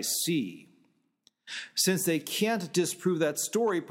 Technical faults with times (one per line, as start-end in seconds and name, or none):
none